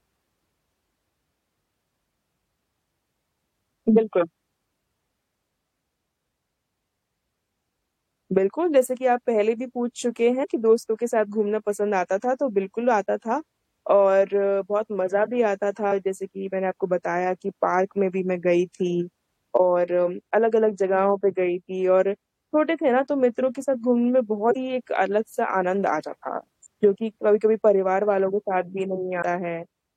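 Compressed frames skipped at 10.43–10.45, 15.88–15.92, 24.48–24.56 and 29.21 s: the speech jumps forward by roughly 70, 150, 100 and 150 ms as whole coded frames are never decoded.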